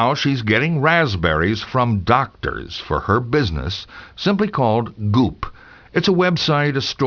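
Aliasing runs through the whole speech clip. Content above a fold point near 5.5 kHz reflects back down as unrelated tones, which points to a sample-rate drop to about 11 kHz without a low-pass filter. Sibilants sound gritty and metallic, with the folded energy roughly 15 dB below the signal.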